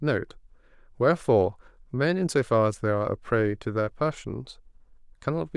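No technical faults can be heard anywhere in the speech recording.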